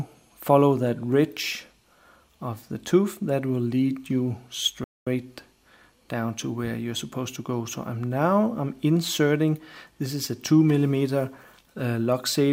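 A playback stall occurs at 4.84 s, where the sound cuts out abruptly mid-flow and stays silent for 225 ms, until 5.07 s, before resuming. The likely cause is the player running out of buffered data or its output thread being briefly blocked.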